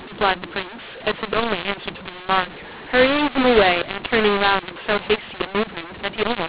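For the whole speech clip, mu-law and A-law are mixed up: mu-law samples decoded as A-law scramble levels, so pauses fill with noise, unlike clipping, which leaves pauses quiet.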